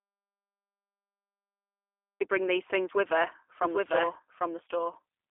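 A speech recording opens in dead silence: from the start until 2.21 s there is nothing at all, not even room tone, before the voice comes in mid-flow with "bring these things with". That dead silence marks it as an audio dropout to silence rather than a natural pause or a noise gate, both of which would leave some floor or a soft onset. The likely cause is that the input was lost, through a disconnected source or a failed link, while the recorder kept writing silence. From 3.62 s, right after "these things with her", a doubled audio track appears and runs to the end. A second, full-band copy about 5 dB quieter trails the original by roughly 0.7 s. Unlike an echo or reverb, it has no decay tail, no room colouring and no repeated reflections, and it begins abruptly. That points to the same audio being mixed in twice, most likely via a slower second capture path or an edit holding two copies. 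Throughout the clip, G.729 codec damage is plainly audible. The sound is confined to a telephone band of roughly 300 Hz to 3.4 kHz, with nothing above 3.5 kHz, and carries a rough, slightly synthetic, buzzy texture. That texture separates it from simple low-pass filtering and fits an 8 kbit/s G.729A stream rebuilding the voice from a filter and pulse model.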